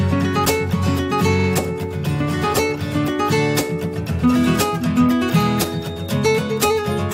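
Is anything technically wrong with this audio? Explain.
Yes, there are two faults.

From 1.39 s to 1.47 s there is a stutter: a short slice of about 43 ms plays twice more in a row. These are repeated frames: a run of compressed data, consistent with a pair of frames, reached the decoder more than once, so it simply played the same material again. The repeats stretch the clip by about 85 ms.

From 5.14 s to the end, a thin, steady whistle at 3.7 kHz sits behind the sound, well below its level and slowly swelling and fading in loudness. This is a feedback whistle, likely caused by a loudspeaker-to-microphone loop held just at the edge of feedback. At that point a single frequency keeps recirculating and sustaining itself without building into a full howl.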